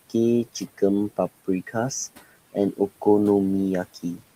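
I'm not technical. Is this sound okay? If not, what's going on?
No. Noise suppressor artifacts run throughout the clip. A noise-removal stage keeps lowering the steady background noise whenever it thinks only noise is present, so the quiet room sound dips between words and swells back under them.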